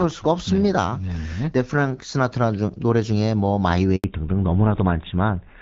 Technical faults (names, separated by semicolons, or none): handover gap; fallback to narrowband